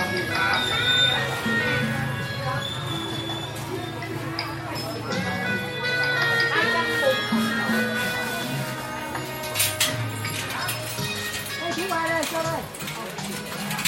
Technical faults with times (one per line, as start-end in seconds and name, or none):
none